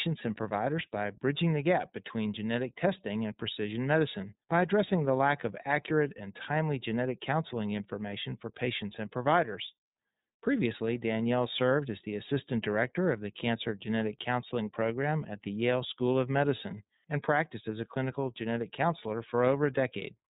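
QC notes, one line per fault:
throughout, iLBC codec: the speech is confined to a narrowband channel, with nothing above about 3.8 kHz, and carries a plainly audible rough, slightly synthetic texture. Each frame's excitation is coded on its own, and the grain fits 30 ms frames at roughly 13 kbps. A simple low-pass filter would dull the sound without this roughness. Unlike codecs that predict across frames, there is no smearing that builds up from one frame into the next.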